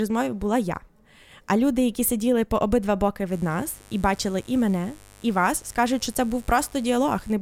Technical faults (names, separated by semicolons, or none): mains buzz